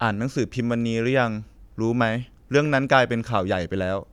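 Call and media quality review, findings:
No faults found in the speech audio. Nothing heard that points to a failing component anywhere in the path.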